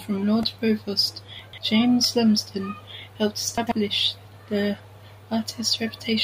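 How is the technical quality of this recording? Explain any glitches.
The recording has four glitches of two kinds. Each is brief.

A repeated buffer occurs at 0.43 s and again at 2.04 s. New audio arrived late, so the playback device replayed the last tiny block of samples. Each block lasts about 1.45 ms, which fits a 64-sample buffer. It repeats three extra times at 0.43 s and four at 2.04 s. Because the piece is so short, it sounds like a click or a brief buzz rather than a stutter. No speech is lost.

Chunks out of order appear from 1.39 to 1.58 s and from 3.58 to 3.72 s. Here a chunk of about 46 ms arrived late and played after chunks that should have followed it. It is three chunks late the first time and two the second. Nothing is missing, but the order is wrong. Each event makes three hard joins, so the speech sounds jumbled for a moment.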